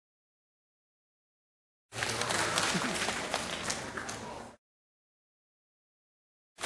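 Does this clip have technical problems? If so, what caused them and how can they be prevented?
No, nothing in this audio points to a technical fault, so there is no cause to trace and nothing to prevent.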